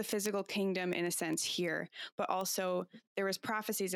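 From 0.12 s to 3.90 s the speech carries word clock ticks, around thirty sharp clicks of uneven strength arriving about every 0.15 s. The receiving clock runs roughly 150 ppm off the sender's, so one sample slips at each crossing. That steady rhythm separates them from random digital clicks.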